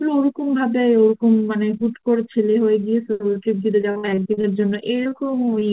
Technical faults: repeated packet loss (robotic sound)

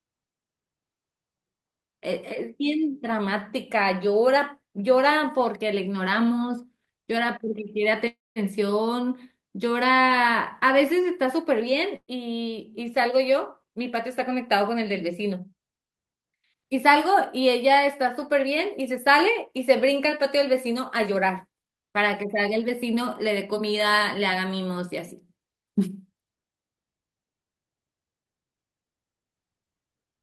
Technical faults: call audio freeze; burst of packet loss; jitter buffer speed-up

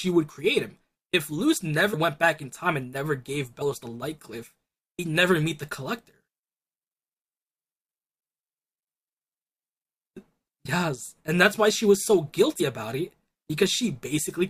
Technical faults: compressed frames skipped

